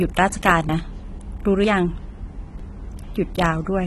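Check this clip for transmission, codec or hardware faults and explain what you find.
One fault runs through the whole clip: AAC compression, heard from start to finish. The likely cause is a low-bitrate AAC-LC encode, in the region of 32 kbps. Starved of bits, the encoder quantises each frame's spectral lines coarsely against its hearing model, and it drops the top band entirely: nothing is left above 12.1 kHz. The speech sounds dull and smeared, and the coarse quantisation leaves a plainly audible warbling, fizzy texture on sibilants and held sounds.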